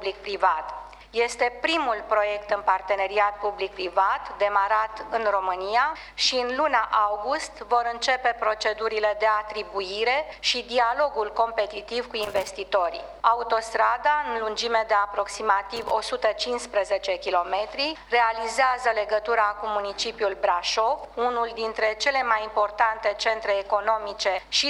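Loose connector crackle appears twice, from 12.23 to 12.48 s and from 15.76 to 15.91 s: irregular scratching bursts where a worn contact intermittently breaks the signal path.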